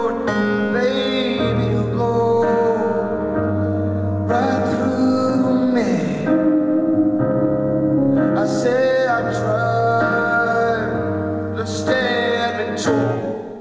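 No technical faults are audible; the audio carries the band limit of a normal call path, with nothing above 8 kHz, which fits a wideband codec such as G.722.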